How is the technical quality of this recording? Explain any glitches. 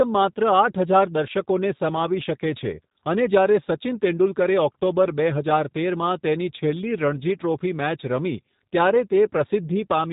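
The technical quality is limited by plainly audible low-bitrate telephone coding across the whole clip. Throughout, a G.729 codec sound is present. The speech is rebuilt from a vocal tract filter, a pitch predictor and a few pulses per frame, which fits an 8 kbit/s stream. This leaves it rough and synthetic, with nothing above 3.8 kHz. That model-built roughness is what sets it apart from simple band-limiting, which only dulls the sound.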